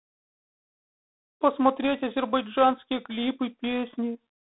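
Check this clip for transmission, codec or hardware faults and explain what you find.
The speech carries a G.726 ADPCM codec fault for its whole length. G.726 sends each sample as a few bits describing how far the signal departs from an adaptive prediction. When too few bits are available, that quantised difference turns into coarse noise that rises and falls with the speech. The rasping hiss heard here is loud enough to suggest the 24 kbit/s mode. The band runs roughly 250 Hz to 3.7 kHz, with nothing above 3.9 kHz.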